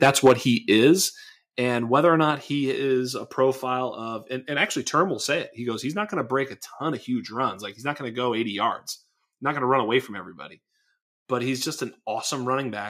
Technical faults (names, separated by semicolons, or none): microphone overload; microphone volume stepped down